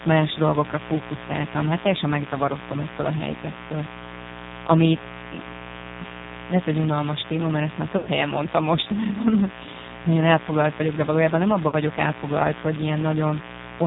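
A mains buzz runs throughout, a raspy 60 Hz hum with harmonics, roughly 15 dB below the speech, showing as evenly spaced horizontal lines on a spectrogram.

The AMR narrowband mobile codec is also heavily audible throughout: buzzy, synthetic speech with a hard ceiling at 4 kHz, which points to a low bitrate near 6 kbps.

Lost AMR speech frames follow at 7.98 to 8.10 s (80 ms, about four frames) and 11.68 to 11.75 s (40 ms). Each is a smeared, fading stretch, with spectrogram energy dimming before normal speech returns.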